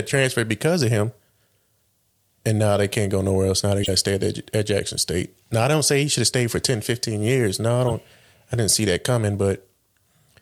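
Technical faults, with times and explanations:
3.83 to 3.89 s and 7.88 to 7.92 s, corrupt frame decoded. Short chirpy bursts cut through the speech, peaking at about -10 dBFS and then about -15 dBFS. A few damaged compressed frames were played anyway. Misread data put energy at the wrong frequencies.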